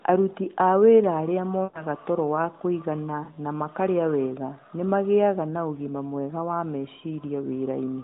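Lost AMR speech frames: checksum failures forced the narrowband decoder to repeat its last good pitch and vocal tract settings at falling gain. From 1.64 to 1.84 s, after "a wĩra arĩa", about 100 ms of sound is smeared and fades, consistent with five 20 ms frames. At 3.24 to 3.31 s, after "toro wa kũigana", a 40 ms gap gives a brief warbling dip before "na makarĩa wega nĩ".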